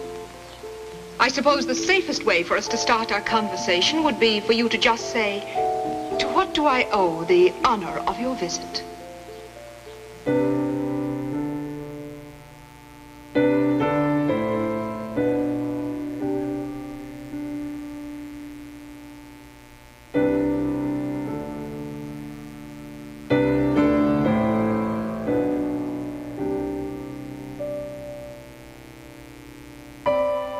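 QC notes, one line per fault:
Throughout, mains buzz: sharp switching spikes twice per 60 Hz cycle stack harmonics up to several kHz, a raspy buzz sitting roughly 25 dB under the sound.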